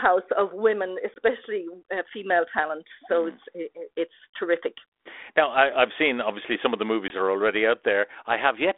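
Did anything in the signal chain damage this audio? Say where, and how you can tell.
Yes. The speech drops into abrupt silent holes at 1.14 to 1.18 s and 7.08 to 7.11 s and resumes with brief roughness. This is packet loss on an ADPCM call: about a single 20 ms packet is lost each time on the network. The 32 kbit/s G.726 decoder's adaptive predictor and step size lose step with the sender and need a moment to resynchronise.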